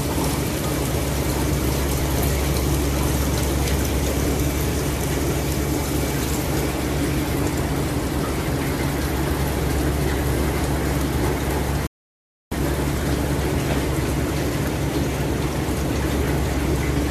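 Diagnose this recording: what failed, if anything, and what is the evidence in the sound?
A rebuffering stall at playback is what failed here. At 11.87 s the sound drops to silence, then picks up at 12.52 s right where it left off. The player ran dry on downloaded audio and waited, so nothing's missing, but about 0.65 s gets added.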